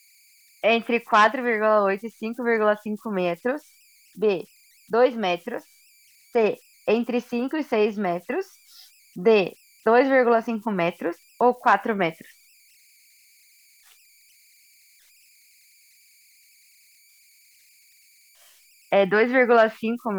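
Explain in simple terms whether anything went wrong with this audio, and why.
Converter idle tones run throughout: the digitizing chip, fed quiet sound without added noise, falls into repeating patterns, leaving a faint whistle around 2 kHz in pauses.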